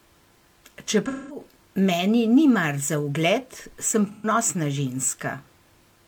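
Speech with AAC frame loss with concealment at 1.07–1.40 s and 4.08–4.26 s. The decoder patches each gap from earlier spectrum, leaving brief smeared, noisy stretches.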